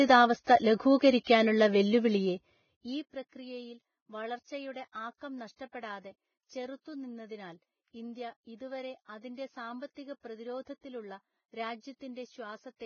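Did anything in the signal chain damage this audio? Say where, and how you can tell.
Yes. At the codec stage, heavy grainy hiss runs throughout and nothing survives above 6.6 kHz, which fits a low-bitrate encode around 15 kbps, likely Vorbis compression.

Pre-echo appears at 0.44, 0.98 and 1.24 s, a hiss about 30 ms before each attack, as block-wide quantisation noise fills the quiet moment ahead of it.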